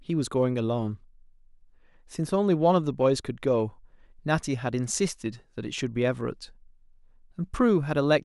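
Nothing in the speech recording registers as a technical fault at any point.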